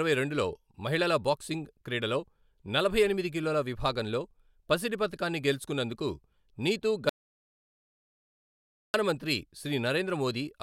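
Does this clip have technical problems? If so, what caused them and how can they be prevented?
Yes. The input feeding the recorder was most likely lost for a moment, through a loose connection, a failed wireless link or an accidental mute, while the recorder kept writing silence. The result is an audio dropout to silence from 7.09 s to 8.94 s, right after "పసిడి పతకాన్ని గెలుచుకొన్నందుకు నీతు". The speech cuts off mid-flow and about 1.85 s is replaced by dead, total silence with no room tone, so whatever was said there is lost. Securing cables and links, checking mute states and monitoring input levels during recording would prevent it.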